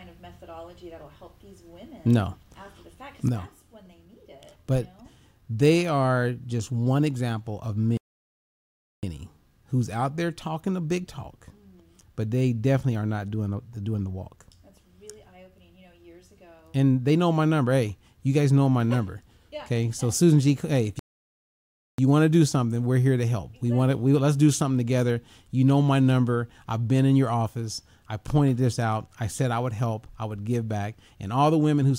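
At 7.97 s the sound cuts to silence in mid-flow for about 1.06 s, resuming at 9.03 s; it happens again from 20.99 to 21.98 s, about 0.99 s. Each is a playback stall, likely the player starving for data or its thread being blocked.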